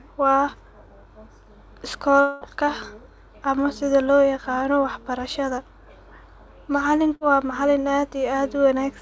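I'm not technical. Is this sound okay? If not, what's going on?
No. There are two brief glitches.

Long network dropout, 2.21 to 2.44 s: for about a fifth of a second the voice turns into a held buzz or hiss that fades, and that stretch of speech is gone when normal sound returns. The likely cause is that the connection briefly stopped delivering audio, and the receiving end filled the gap by stretching out the last sound it had.

Burst of packet loss, 7.15 to 7.24 s: a shorter hiccup, about 60 ms of speech missing. A few small chunks of audio were lost in transit, so the receiver briefly held and faded the last sound before jumping ahead.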